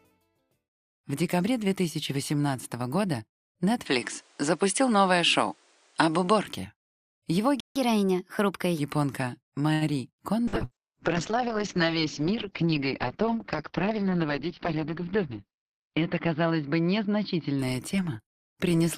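Around 3.86 s the recording most likely switched to a poorer input device. From then until 6.46 s the band is narrower, the level shifts by about 5 dB, and a new noise floor appears roughly 40 dB under the signal. The sound turns duller with no gap at either change. At 7.60 s there is a playback stall, most likely the player running out of data, and the output goes silent for 155 ms until 7.76 s. The player then catches up at higher speed, resampling its backlog at 1.15 times normal until 8.79 s, so the audio runs fast and about two semitones sharp before settling back. From 9.73 to 9.84 s a late packet causes a short stall. The receiver stretches the last sound for 77 ms while it waits, leaving a held stretch, but nothing is lost and the delay grows by 77 ms. A call bitrate drop begins at 10.48 s and lasts to the end, cutting the encoder from 128 to 7 kbps and the bandwidth from 20 kHz to 6 kHz, so the sound becomes coarse and muffled. 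Within it, from 10.65 to 10.74 s, a burst of packet loss removes 60 ms. The receiver fills 57 ms by extending and fading the last sound, then jumps ahead. Finally, from 13.92 to 14.76 s, a jitter buffer speed-up trims about 70 ms of excess delay by cutting short pieces, so the audio runs 8% faster at unchanged pitch and sounds hurried.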